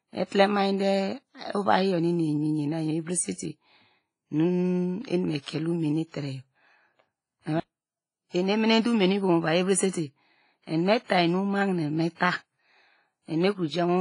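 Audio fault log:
Throughout: WMA compression. The speech sounds ringing and washy, with hiss breathing along with it and nothing above 10.1 kHz, likely from heavy transform coding at a bitrate near 24 kbps.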